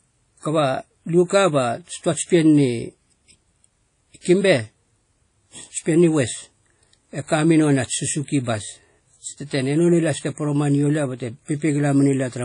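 Speech that has likely passed through WMA compression at a low bitrate, pointing to about 32 kbps on an early encoder. Long transform blocks smear quantisation noise, leaving plainly audible ringing, washy hiss that breathes with the voice, and nothing above 10.1 kHz, throughout.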